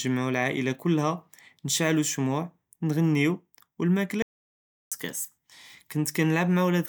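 At 4.22 s the speech cuts off abruptly into dead silence, with no room tone at all, and resumes mid-flow at 4.92 s. This audio dropout to silence erased about 0.69 s, likely from the input briefly disconnecting while the recorder kept writing silence.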